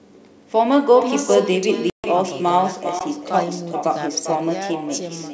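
Right from the start there's echo with no canceller running the whole way through. Whoever's on the far end has the call on a loudspeaker, their mic picks it back up, and nothing strips it out. So every phrase gets shadowed roughly four tenths of a second later by a copy sitting about 8 dB down, thinner than the original. That delay is the round trip through the network.

At 1.90 s you hit packet loss on the ADPCM call. There's a hard-edged hole running to about 2.05 s, 140 ms in all, which points to a run of several packets gone, something like seven at 20 ms each. The missing stretch was filled with silence, and meanwhile the decoder's predictor and step size drifted out of step with the sender's. When the speech comes back, it arrives slightly distorted, then settles over the next few tens of milliseconds.

Then at 2.99 s there's a block of digital silence, a short hole lasting 16 ms. 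That length fits a 256-sample buffer that didn't get filled in time. The output drops straight to silence and back with no fade, and at that length it reads as a short gap rather than just a tick. Throughout, the G.722 wideband coding keeps the speech clear up to the top of the band.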